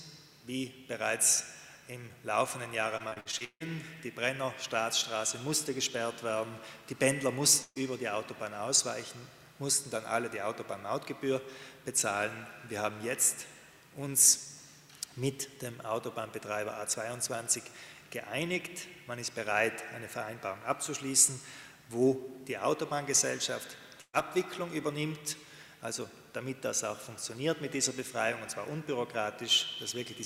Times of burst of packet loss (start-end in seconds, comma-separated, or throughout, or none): 7.62-7.77, 24.01-24.15